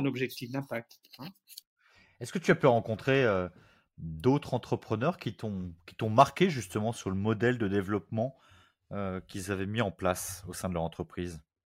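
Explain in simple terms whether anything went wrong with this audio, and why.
Nothing went wrong that could be heard here: listening carefully through this speech recording, no technical problem stood out at any point.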